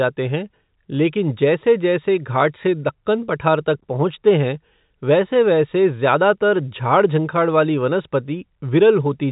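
Nothing here goes wrong; the speech simply carries the narrow, boxy character of an ordinary G.711 telephone line, with nothing audible above about 3.8 kHz.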